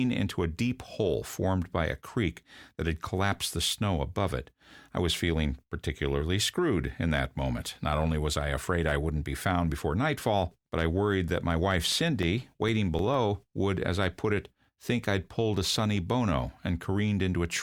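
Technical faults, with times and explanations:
11.92 to 13.14 s, CD scratch ticks: just after "worried that my wife" and before "would as I put", nine brief ticks, the longest about 3 ms, repeat about seven times per second, once per disc rotation, as a scratch overwhelms error correction and the player patches the missing samples.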